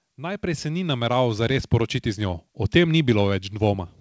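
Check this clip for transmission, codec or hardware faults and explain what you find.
One fault stands out, on a speech clip whose sound stops at 8 kHz, consistent with a wideband call codec. From 0.16 s to 3.98 s there is automatic gain rising. The gain control judged the input too quiet and kept raising its gain, by about 11 dB overall. Voice and background noise swell together. Loudness climbs steadily across the clip, not in steps.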